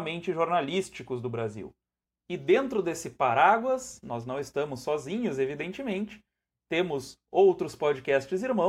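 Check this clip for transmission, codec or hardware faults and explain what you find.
No faults can be heard anywhere in the speech. Listening through the whole clip turns up nothing that needs explaining.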